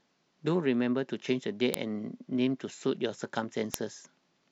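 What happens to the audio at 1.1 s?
Nothing goes wrong at 1.1 s; the speech continues intact through that moment, with no dropout, click or distortion.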